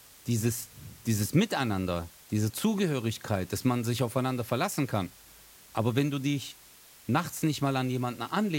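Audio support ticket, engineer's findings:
Low bit depth with dither, whole clip: constant even hiss roughly 25 dB under speech, fits 7-bit quantisation with dither. Noise steady, not signal-dependent. No gritty distortion, unlike undithered truncation.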